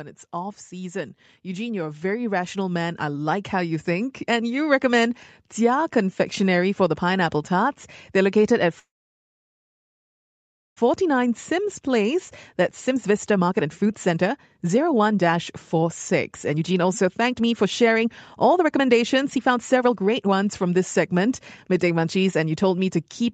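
From 0.31 to 4.83 s, automatic gain rising lifts the level by about 10 dB over several seconds. Unlike a talker simply getting louder, the background noise swells along with the speech, which points to the call's gain control raising its gain on a quiet input.

At 8.79 s, right after "located at", the audio stalls until 10.79 s, a call audio freeze of about 2 s. Most of it, about 1.9 s, is silence. The likely cause is delayed packets emptying the jitter buffer. Unlike a dropout, the speech resumes exactly where it stopped, so nothing is lost and a gap is inserted instead.

Jitter buffer speed-up follows to clear the built-up delay. It runs from 10.89 to 12.14 s at 104% speed, 12.61 to 18.07 s at 122%, 18.51 to 21.27 s at 122%, and 21.72 to 22.97 s at 107%. The two middle stretches trim roughly a second and 0.7 s. Pitch stays unchanged while the faster stretches sound hurried, which distinguishes this from a fast talker or a tape-speed change.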